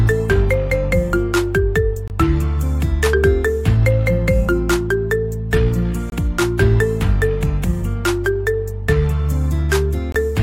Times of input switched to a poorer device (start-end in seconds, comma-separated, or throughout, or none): none